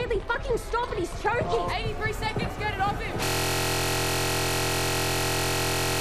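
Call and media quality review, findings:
Steady 43.1 Hz buzz from 3.25 s to end of clip. System hang loop: host or driver froze while the audio hardware replayed one 23.22 ms ring-buffer segment over a hundred times, which fits a 1024-sample buffer.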